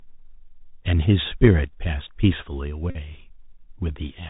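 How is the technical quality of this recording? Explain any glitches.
The recording has limited technical quality: the whole clip passes through a narrowband Bluetooth headset link, and one short dropout occurs near the three-second mark.

The Bluetooth CVSD headset codec affects the entire clip. The signal is coded as a stream of single up-or-down steps whose size adapts, which fits a 64 kbps link. Nothing above 4 kHz survives. The damage is plainly audible: s sounds come out scratchy, loud bright passages smear where the steps cannot keep up, and a granular hiss sits under the speech. Plain low-pass filtering would remove the treble cleanly, without this grit.

A Bluetooth headset packet repeat runs from 2.90 to 2.97 s, covering about 49 ms of lost audio. That fits roughly thirteen consecutive packets that never arrived, each one filled by decoding the previous packet's bits again. Because the same fragment recurs every 3.75 ms, it becomes a steady buzz near 267 Hz until clean packets resume. 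A click or a silent gap would sound different: this dropout has a definite pitch.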